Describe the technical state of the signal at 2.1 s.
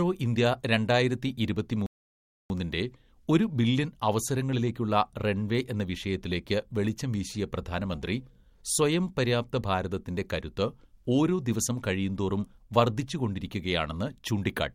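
At 2.1 s the signal is in a rebuffering stall. It runs from 1.86 s to 2.50 s, just after "ഇന്ത്യ രണ്ടായിരത്തി". The player used up its downloaded audio and halted until more data arrived. The speech cuts abruptly to silence for about 0.64 s. It then resumes exactly where it stopped. No speech is lost or skipped. The stall only inserts extra time into the clip.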